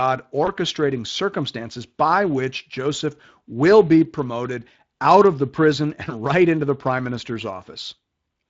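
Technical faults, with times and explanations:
Throughout, Speex codec: the speech sounds grainy and somewhat hoarse, with plainly audible coding damage. This CELP codec models each frame as a filter driven by a coarse excitation signal, and the lost detail here fits roughly 20 kbps.
0.45–0.5 s, VoIP packet loss concealed by the speech codec: a brief smeared patch just before "circumstances by which". The decoder filled the gap by extending its last pitch and filter at falling gain. This fits a single missing 20 ms frame.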